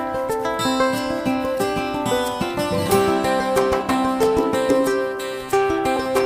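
The audio has one instance of compressed frames skipped at 5.96 s, near the end. The sound jumps ahead by roughly 20 ms, which fits about two missing frames of 10 ms each, dropped from the file or rejected by the decoder as damaged. Unlike a plain dropout or a buffer glitch, there is no silent gap. The audio simply jumps ahead where material is missing.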